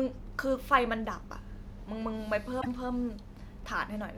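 At 2.58 to 2.67 s, damaged data in the compressed stream breaks decoding. The decoder loses frame sync and hunts for the next header. It sounds like a brief glitch in the speech.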